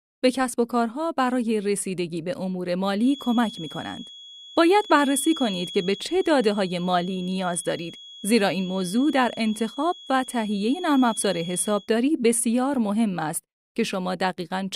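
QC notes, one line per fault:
2.95–11.91 s, feedback whistle: a thin, steady tone at 3.4 kHz sits around 20 dB below the speech, swelling and fading slowly in level; likely a loudspeaker-to-microphone loop held just at the point of feedback, sustaining one frequency without running away.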